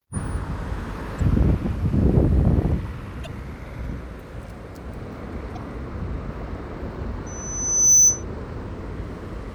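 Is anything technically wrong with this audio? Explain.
Yes, there are two kinds of fault here.

There's damaged data in a compressed stream at 1.17–1.21 s, 3.23–3.27 s, 5.55–5.57 s and 8.80 s. Bad bytes throw the decoder off, so it drops sync and hunts for the next frame header. Each spot comes out as a short glitch.

Then from 7.26 to 8.24 s there's a loudspeaker feedback squeal at 6 kHz. A mic is hearing its own speaker, and the loop gain tops one at that pitch. The tone swells over roughly 0.7 s to around 10 dB above the sound.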